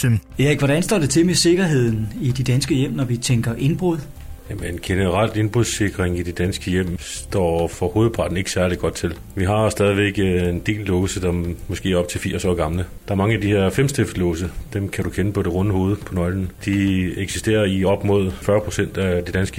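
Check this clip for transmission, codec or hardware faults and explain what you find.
Nothing in the clip points to a transmission, codec or hardware fault. No glitches, dropouts or other disturbances can be heard anywhere in the audio.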